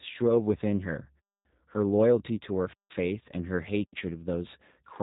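G.729 codec damage runs through this entire speech recording. Nothing above 3.8 kHz survives, and the rough, slightly synthetic texture fits 8 kbit/s G.729A. It rebuilds each 10 ms frame from a vocal tract filter, a pitch predictor and a few pulses, so fine detail is lost. Blocks of digital silence cut in at 1.20 to 1.45 s (256 ms), 2.73 to 2.90 s (about 171 ms) and 3.84 to 3.93 s (about 85 ms). Each drops abruptly to silence and back. The last two gaps fit whole buffers of 8192 and 4096 samples that the program failed to fill in time.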